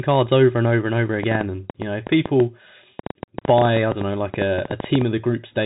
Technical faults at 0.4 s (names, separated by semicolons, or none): Bluetooth CVSD headset codec